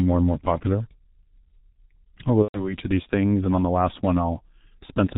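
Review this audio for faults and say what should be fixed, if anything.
The whole speech clip carries heavy G.723.1 codec damage. Nothing above 4 kHz gets through, so the voice sounds muffled. The slow-updating voice model in 30 ms frames adds hoarseness and smears consonants. The coarse texture fits the 6.3 kbit/s mode. Prevent it by using a wideband codec at a higher bitrate.

From 2.42 to 2.76 s, between "I'll go" and "of these things and", there is VoIP packet loss concealed by the speech codec. About 120 ms of audio went missing, which fits four lost 30 ms frames. The decoder kept repeating its last pitch and filter while lowering the level, so the speech smears into a fading buzzy tone or coloured noise, muted from the third lost frame on. Because each frame builds on the previous one, the voice stays weak or distorted for a while after packets return. Prevent it with forward error correction, an adaptive jitter buffer, or a more reliable network path.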